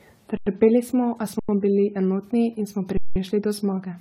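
The speech has most likely been through a lossy codec around ten times, each decode and re-encode quantising again on a shifted frame grid. This is generation loss. The errors pile up into a swirly, hollow texture with smeared consonant attacks, and the spectrum is empty above 17.8 kHz, which points to an AAC-style encoder at a moderate bitrate.

From 0.37 to 0.46 s and again from 1.39 to 1.49 s, the output buffer ran dry and the converter held its last sample value until data returned. This is an underrun with held sample. Each time, the speech freezes into flat silence for about 93 ms, a length that fits a 4096-sample block, without a click on the way in. Playback then resumes exactly where it stopped, so no speech is skipped and the return is soft.

From 2.97 to 3.16 s, a longer underrun of the same kind holds the signal flat for about 186 ms, which suggests two buffers' worth. It also resumes softly with nothing lost.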